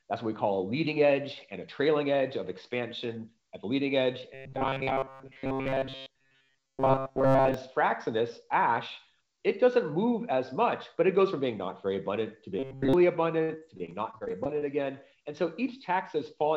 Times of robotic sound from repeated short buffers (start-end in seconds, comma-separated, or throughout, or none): 4.34-7.54, 12.59-12.93